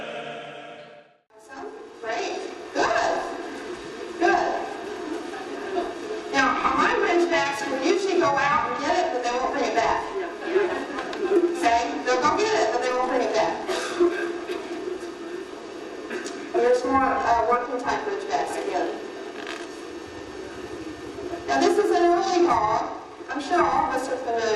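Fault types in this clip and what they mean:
Periodic clock jitter: the converter's sample clock is being wobbled at a steady rate, roughly 1 kHz here, so every component of the sound picks up sidebands spaced about that far above and below it. You hear it as a rough, metallic edge that's strongest on the high-frequency content and disappears whenever things go quiet. It starts at about 0.78 s and hangs on right to the end.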